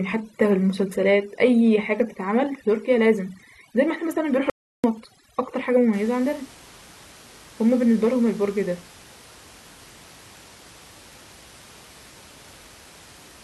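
Speech, with overdone noise removal from the start to about 5.93 s. A noise reduction stage set too aggressively is pulling individual frequency bands down or out wherever they sit close to its noise estimate, so the quieter parts of the voice disappear along with the background noise. The gaps between phrases fall to near silence dotted with twinkling specks. What separates this from low-bitrate codec smearing is that it stops partway through: after 5.93 s the room noise returns at a natural level, about 25 dB under the speech. Inside that stretch, from 4.50 to 4.84 s, the audio drops out to silence for 0.34 s. It cuts off in mid-flow and comes back just as abruptly. This gap is silent, with no room tone and no specks, which tells it apart from the noise reducer's deep but still flickering troughs and from a gate closing gently. Whatever was spoken there is lost, and the likely cause is a brief loss of the input signal while recording continued.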